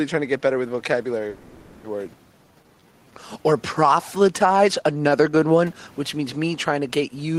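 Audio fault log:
1.29–1.86 s, call audio freeze: the sound stops advancing and the last fragment is stretched into a fading buzz for about 550 ms, then resumes exactly where it paused, with nothing lost. The likely cause is packets held up in transit while the jitter buffer ran dry. On a spectrogram it shows as a smeared, decaying band with no new onsets.
2.12 s, skip ahead: roughly a third of a second of sound is dropped and the two sides are spliced with only a ~10 ms bridge, so playback lurches forward. Part of the delay that built up during the freeze is thrown away in one jump. The waveform shows an abrupt discontinuity with no gap.
2.38–5.41 s, jitter buffer slow-down: the buffer rebuilds its reserve by repeating single pitch periods, adding about 290 ms and running the sound at 91% speed with unchanged pitch. Vowels drag. A spectrogram shows elongated, repetitive harmonic stretches, with room noise sitting about 34 dB below.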